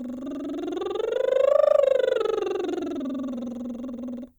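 No technical faults can be heard in this music clip, and the signal runs without any interruption or damage from the transmission or recording chain.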